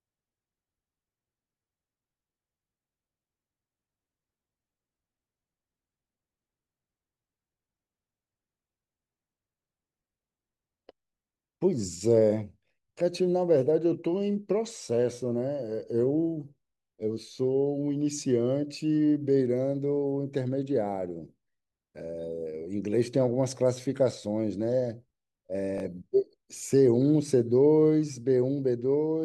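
Speech, with two repeated buffer faults at 12.68 to 12.70 s and 25.78 to 25.80 s. Each time, fresh audio arrived late, so the device played its last short chunk once more, with a hard join on either side. The repeat lasts about 20 ms, which fits a 20 ms buffer, and roughly that much audio is lost. It comes across as a brief click or buzz rather than a silent gap, which sets it apart from a dropout.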